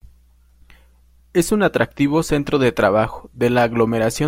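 No technical faults can be heard anywhere in the speech.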